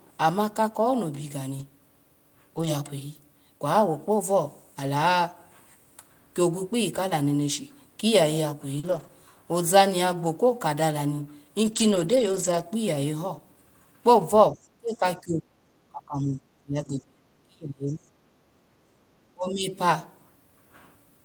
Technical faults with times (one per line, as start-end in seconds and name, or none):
1.59-1.61 lost packet rebuilt from error correction
2.57-2.67 lost packet rebuilt from error correction
8.79-9.11 short concealed packet loss
8.83-9.05 lost packet rebuilt from error correction
11.63-12.61 lost packet rebuilt from error correction
14.51-18.09 speech suppressed in double talk
14.63-14.68 other side's voice leaking through
16.19-16.29 lost packet rebuilt from error correction
18.41-18.95 background gated by the echo canceller
19.34-19.72 speech suppressed in double talk